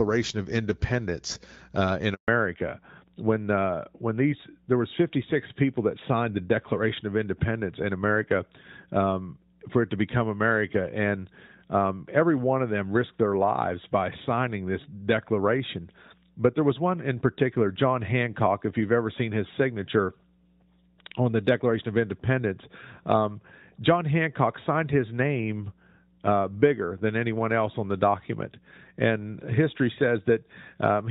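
At 2.14 s, just after "uh in", a handover gap opens: the call switched networks and no speech frames came through during the move. The audio drops away quickly and stays silent for 140 ms, until 2.28 s, and whatever was said in that stretch is gone.

From 2.28 s to the end, the call shows a fallback to narrowband. The link left HD Voice for an older narrowband codec, which fits a change from AMR-WB at 12.65 kbit/s to AMR-NB at 12.2 kbit/s. Nothing above 4 kHz survives, so the speech turns duller and rougher than the clearer wideband opening.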